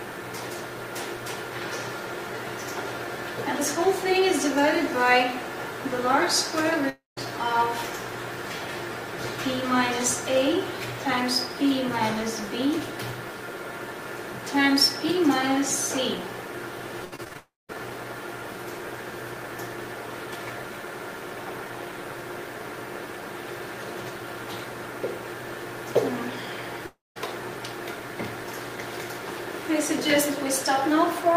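A long network dropout at 6.89 s to 7.19 s is likely the cause of a gap of roughly 0.3 s: the last sound is stretched into a fading buzz, then about 170 ms of silence follows before the audio resumes with that stretch gone. Repeated packet loss (robotic sound) runs from 17.05 s to 17.73 s, with six short holes, the longest 72 ms, patched by repeating what came before. About a quarter of that span is concealed, giving a choppy texture with small pieces missing. Inside it, from 17.37 s to 17.75 s, a second long dropout likely stalls the stream again. There the concealment fades and about 200 ms of silence remains before playback picks up without the lost third of a second. A third long dropout at 26.86 s to 27.18 s likely behaves the same way. A decaying hiss trails off into about 190 ms of silence, and the audio returns without the roughly 0.3 s that never arrived.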